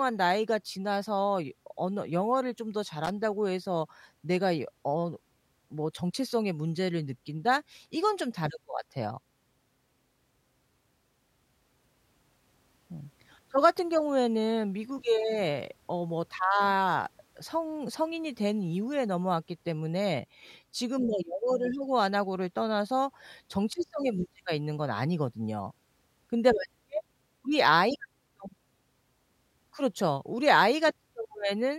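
At 3.04 to 3.10 s there's a short loose connector crackle: a worn contact briefly making and breaking, chopping the speech into a scratchy burst.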